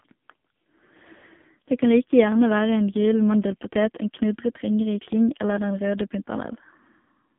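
The whole clip passes through the AMR narrowband mobile codec. Audio is confined to 150 Hz to 3.5 kHz. Heavy damage makes the speech buzzy and synthetic, which fits a low rate near 5.9 kbps.

From 1.18 to 1.23 s there are lost AMR speech frames. The decoder reuses old settings for about 40 ms, fitting two lost frames. This is heard as a brief dip or warble.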